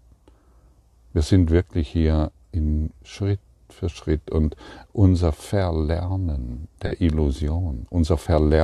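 At 6.86 s and again at 8.23 s a short stretch of the speech is covered over, roughly 70 ms then 40 ms. That's a corrupt frame concealed: damaged AAC data got caught, and the decoder papered over a few frames.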